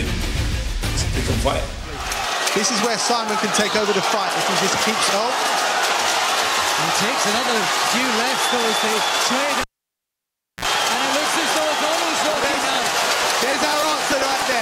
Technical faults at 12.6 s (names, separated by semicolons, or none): periodic USB or driver dropouts